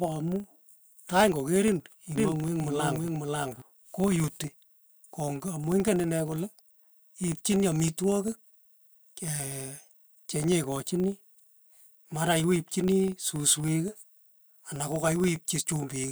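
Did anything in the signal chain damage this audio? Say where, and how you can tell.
Yes. In the processing stage, a filter restarted on every block: it drops its state at each block boundary and starts again from silence. That puts a small transient at every block start, heard throughout as a 25 Hz buzz that rises and falls with the speech level, which fits 40 ms blocks.

From 2.18 to 3.62 s there is a doubled audio track, most likely from a second, slower capture path in the driver or buffer stage. A full-band copy at about the same level trails by roughly half a second. It has no decay or room colour, and it starts and stops abruptly.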